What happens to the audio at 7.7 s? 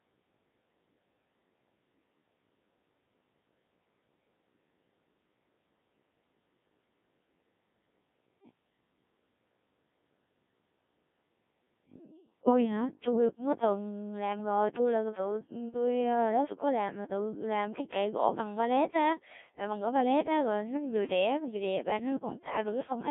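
At 7.7 s the speech is still passing through the Codec 2 vocoder that runs the whole clip, at a heavily squeezed rate that fits about 1.3 kbit/s. Only pitch, voicing, energy and a rough spectral envelope survive. The voice is rebuilt from sine waves within roughly 150 Hz to 3.6 kHz, so it sounds robotic and buzzy.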